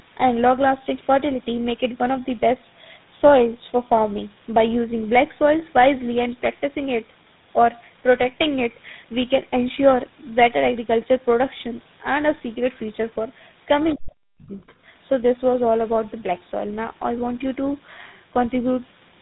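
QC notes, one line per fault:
throughout: tandem speech coding. The sound is rough, muffled and a bit warbly, with nothing above 3.9 kHz. That combination points to the audio being decoded and re-encoded at several network borders, with each coder chewing on the previous one's output. It sounds like three speech codecs in a row, ending on something like GSM full rate. The damage stacks, so it's worse than any single link would give you.
13.89–13.95, 14.40–14.47, 14.67–14.74: other side's voice leaking through. Three short scraps of a second voice show up, each about 60–70 ms. They sit about 25 dB, about 30 dB and about 35 dB below the main speech, fading with each one. Likely cause: the far end's loudspeaker audio reaching the microphone and the echo canceller not fully removing it.
13.95–14.77: speech suppressed in double talk. Right as the first leak ends, the main speech drops away, by as much as roughly 40 dB at its deepest, and stays affected for roughly 0.7 s of that span. 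The last two leaked scraps land inside this window. Likely cause: both sides talking at once, so the echo canceller couldn't separate the local talker from the loudspeaker echo and pulled everything down. That's why the voice dips.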